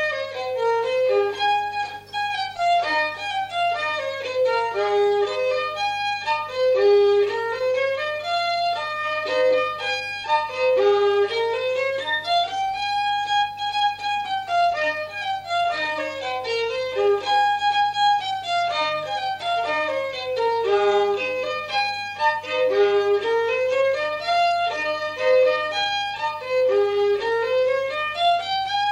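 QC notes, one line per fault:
No faults found on review; nothing to log.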